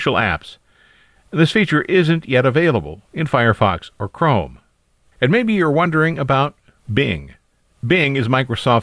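No technical faults can be heard anywhere in the recording. Nothing in the recording or playback chain audibly interferes with the speech at any point.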